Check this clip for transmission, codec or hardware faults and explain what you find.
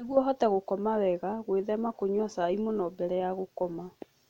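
Listening to the speech in this recording, nothing stands out as a transmission, codec or hardware problem at any point.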